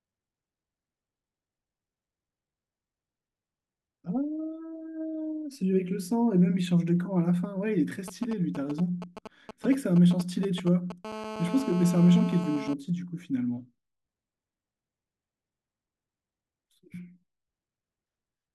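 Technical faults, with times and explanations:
8.08 to 10.92 s, GSM signalling bursts. A 2G phone close to the recording chain is exchanging short control messages with its network, not carrying a call. Each group of radio pulses is picked up and rectified by the audio circuitry. The result is a galloping dit-dit-dit of brief buzzes at 217 Hz, matching the phone's burst rate. It sits roughly 10 dB below the speech and starts and stops in clusters.
11.05 to 12.74 s, GSM phone buzz. A 2G phone nearby holds an active call and transmits continuously in bursts 217 times a second. The audio stage rectifies every radio pulse, so the interference becomes a steady, hard, raspy buzz. Its fundamental is 217 Hz, with many harmonics stacked above it. It has nothing to do with the speech. It sits about 11 dB below the speech level until it stops at 12.74 s.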